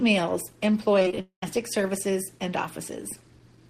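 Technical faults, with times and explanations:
0.99–1.18 s, repeated packet loss (robotic sound): Audio stopped arriving again and again over this short stretch, with gaps of up to 20 ms and about 80 ms lost in total. The receiver patched each hole by stretching out the sound just before it, so nearly half of this span is filled-in material rather than real signal. The quick alternation of real and repeated sound makes the speech choppy, with a robotic edge and small pieces missing.
1.21–1.43 s, long network dropout: The sound cuts out for about 220 ms, and none of that stretch is recovered. The receiver first carries the last sound forward as a fading buzz or hiss, and that filler then gives way to roughly 110 ms of silence before the speech resumes with the lost part skipped. The likely cause is a break in the network stream long enough that concealment could not cover it.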